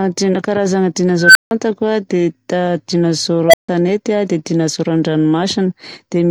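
At 1.20 s the speech is interrupted by an unstable filter. A recursive filter stage has run away, producing a tone of roughly 1.5 kHz that swells over about 147 ms into clipping before the arithmetic overflows and the output drops to silence for 160 ms. The same failure recurs from 3.48 to 3.69 s, this time near 700 Hz, building faster (about 54 ms) and leaving a 150 ms gap.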